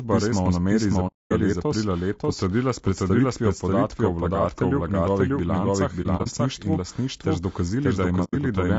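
Speech runs through the whole clip with a doubled audio track. A second, full-band copy follows about half a second behind, at roughly the same loudness. It has no decay or room colour. It is likely a second capture path or an edit holding two copies out of step. The voice also sounds rough and grainy throughout, with noise between the harmonics and a thin, artificial top band. This points to low-delay AAC compression, likely AAC-ELD at 32 kbps, whose short frames resolve pitch poorly. There are three spells of AAC frame loss with muting. The sound fades out and back in smoothly because the decoder zeroed the missing frames. The longest hole runs from 1.07 to 1.32 s, about 240 ms, between "nameri iz" and "letos potrdila s predstavitvijo". From 6.02 to 6.27 s, three short dropouts of about 30 ms each are scattered. A 90 ms hole falls at 8.24 to 8.35 s.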